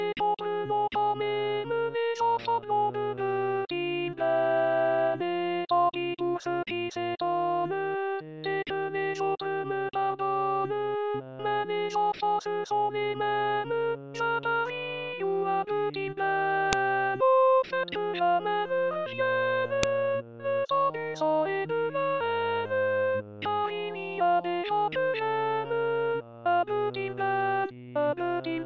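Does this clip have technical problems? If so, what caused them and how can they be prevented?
Yes. There are two sharp, loud clicks, at 16.73 s and 19.83 s, caused by a file header played as audio. Each marks a point where a separate WAV piece was joined on or streamed in with its header still attached, so those few dozen header bytes were decoded as samples. On the waveform each shows as a narrow spike unrelated to the surrounding signal. On a spectrogram it shows as a thin vertical line spanning the whole frequency range. To prevent this, strip each piece's header before concatenating or streaming, and write a single header for the combined file.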